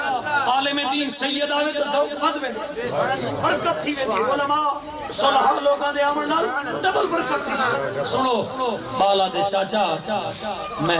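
No technical faults are audible in this audio.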